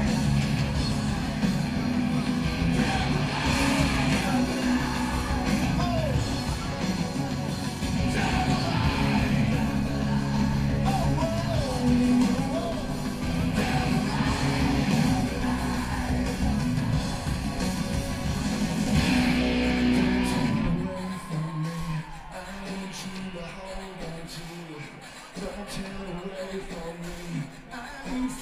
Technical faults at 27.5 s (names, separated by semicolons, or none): none